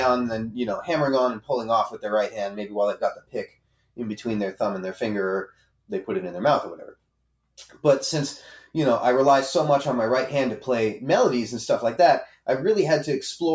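From the start, a noise suppressor meant for speech is applied to this sound. It treats sustained parts and ambience as noise. The level keeps swinging by around 5 dB as the processing clamps down and lets go. Held material and decays thin out while attacks pass. The result is an uneven, thinned sound across the whole clip. It sits on top of normal call microphone processing, which leaves nothing above 8 kHz.

Then come deeper dips, each a sound cut by the noise suppressor. At 2.5 to 2.76 s the level falls by about 10 dB for a brief moment. At 3.14 to 3.99 s it drops by about 19 dB for most of that span. The same happens at 5.5 to 5.91 s and 6.92 to 7.57 s, both down about 19 dB. At 12.28 to 12.47 s a short dip of about 18 dB follows. Each time the sound sinks or its tail is chopped off.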